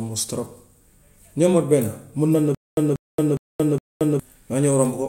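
From 2.55 to 4.2 s the speech falls into a stutter with silent gaps. A 187 ms fragment repeats four times, each followed by 226 ms of silence, on a 412 ms cycle. The stream likely stalled and replayed its last chunk. The intervening speech is lost.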